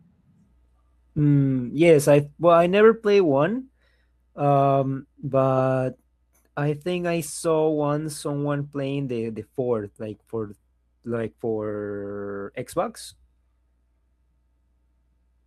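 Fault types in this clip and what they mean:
Short stall from a late packet: At 10.47 to 10.52 s, just before "like for", the speech briefly hangs. One packet arrived late, so the jitter buffer had nothing left to play. The receiver held the last sound for about 20 ms until the packet showed up. Playback then resumed at the right spot, so no speech is lost. The held sound gives a faint buzz or dip, and everything after runs 20 ms later.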